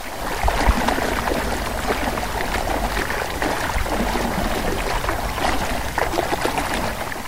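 A recording of sounds carries a coarse, grainy distortion from start to finish that shifts with the sound itself. Quiet passages turn gritty, and the softest moments either drop out to silence or sputter between two levels, with the error sitting around 20 dB below the signal. This is low bit depth without dither: the likely cause is samples cut down to very few bits by truncation rather than rounding, which fits a 6-bit word length.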